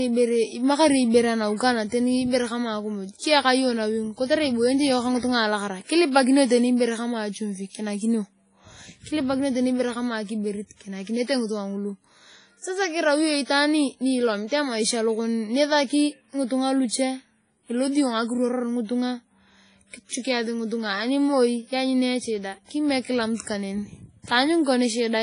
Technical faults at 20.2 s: WMA compression; pre-echo

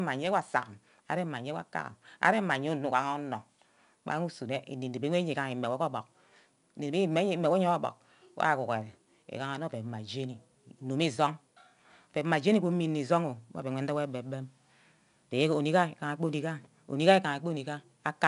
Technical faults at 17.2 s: 4-bit ADPCM compression

